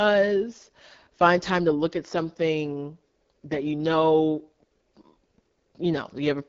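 A speech clip run through the AMR wideband (HD Voice) codec the whole way. It's plainly rough and raspy, with nothing above 7.3 kHz, which fits the low 8.85 kbit/s mode.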